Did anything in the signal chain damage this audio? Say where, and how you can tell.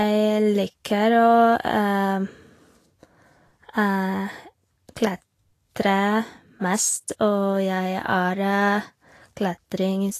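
Yes: throughout, the speech is hissy and grainy, cut off above 14.2 kHz, likely Vorbis compression at the codec stage quantising treble coarsely at a low bitrate.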